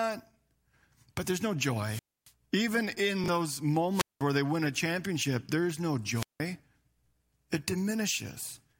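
Wireless microphone squelch dropouts occur at 1.84 to 2.31 s, 3.91 to 4.22 s and 6.13 to 6.40 s. Each time the radio signal fades until the receiver mutes, so hiss rises, then a silent hole of about 275, 196 and 173 ms opens before the speech returns. Between the first two dropouts, at 3.24 to 3.28 s, chunks play out of order: a 20 ms chunk plays one chunk late, leaving a brief jumbled moment.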